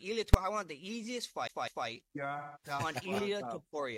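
Invalid numbers at full scale appear at 0.34 s. A calculation produced infinite or invalid values, which were clamped to the largest possible sample value, so the output jumps to one extreme value far beyond the audio's peaks and stays there for about 5.8 ms, a span that fits a 256-sample processing block. Because the block is so short, the jump into the pinned value and the drop back out merge into a single hard bang.

CD stuck on one turn runs from 1.47 to 1.88 s. A scratch keeps throwing the laser back to the same spot on every revolution, so a slice of audio roughly 0.20 s long plays twice in a row, with a brief mute at each jump back. The result is the quick, evenly spaced stutter of a skipping disc. The segment repeats itself before playback finally moves on.

AAC frame loss with concealment affects 2.38 to 2.66 s. Roughly 170.7 ms of coded data went missing, which points to four lost frames. 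The decoder covered the gap by rebuilding sound from the last good spectrum. Instead of a clean gap, this span comes out smeared, noisy or phasey, and the original detail is missing until proper decoding resumes.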